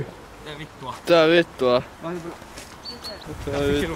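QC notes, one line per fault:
No faults found: no audible interruptions, distortion or artefacts from the transmission chain.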